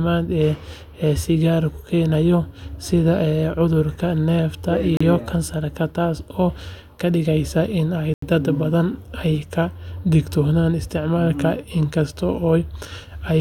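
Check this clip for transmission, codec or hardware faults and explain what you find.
Two short dropouts, likely a Bluetooth stall, at 4.97 to 5.01 s and 8.14 to 8.23 s. Delayed packets let the headphone buffer run dry, so the speech cuts to silence for 34 ms and then 85 ms before resuming.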